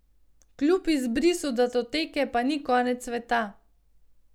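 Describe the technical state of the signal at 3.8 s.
At 3.8 s the speech signal is intact, with no audible fault at that point.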